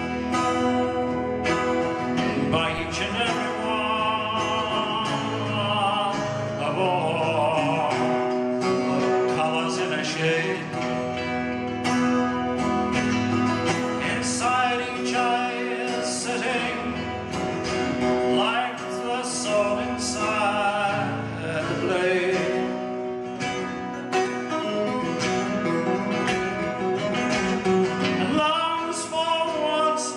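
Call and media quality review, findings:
DC step at 2.78 s. Single low thump as the waveform's zero line jumps by about -32 dBFS. Offset then bleeds away through a 5 Hz high-pass, so no lasting shift. Sound continues unchanged across the event. Probable component: converter recalibrating, or an input carrying an offset switched into the path.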